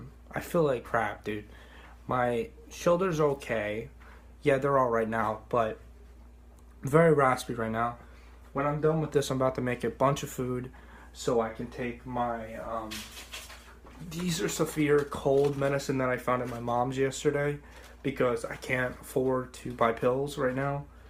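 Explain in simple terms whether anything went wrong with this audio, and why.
There are two small slip-ups: a single sharp click at 14.55 s and another at 18.07 s. These sound like dropped samples. For a tiny fraction of a millisecond, a sliver of the audio likely went missing, so the waveform jumps straight to a later point and snaps audibly. Nothing meaningful is lost because the gap is far too short for that, but each jump leaves a quick tick in the sound.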